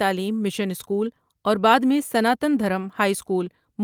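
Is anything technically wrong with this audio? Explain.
No, nothing technically wrong is audible anywhere in this recording.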